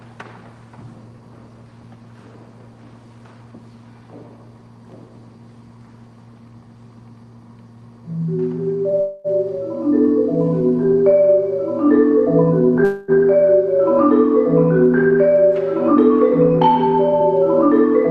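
A call audio freeze occurs twice, at 9.00–9.27 s and 12.84–13.11 s. Each time the last sound is stretched into a fading buzz or hiss lasting about 240 ms, and then the audio picks up exactly where it left off with nothing lost, so the clip simply slips later by that amount. The likely cause is delayed packets leaving the jitter buffer empty while the receiver improvised a fill. A jitter buffer speed-up follows at 15.89–17.69 s. There the receiver drains a backlog of buffered audio by repeatedly snipping out pitch-period-sized slices, about a tenth of a second in total. The sound therefore runs at 105% speed with its pitch unchanged and feels slightly rushed. Throughout, the audio is band-limited at 12 kHz and carries coding noise consistent with an Opus call stream at around 32 kbps.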